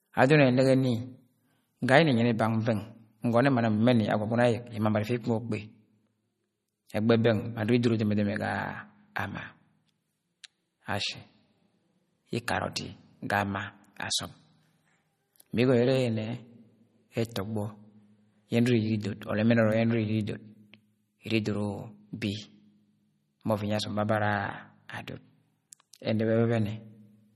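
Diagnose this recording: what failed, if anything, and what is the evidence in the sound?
Codec stage: throughout the speech the treble stops dead at 14.5 kHz, and the remaining detail swirls and flickers, which fits a low-bitrate encode around 32 kbps and is likely MP3 compression. Unlike a plain low-pass filter, weak frequency lines here switch on and off between frames, leaving watery, metallic chirps.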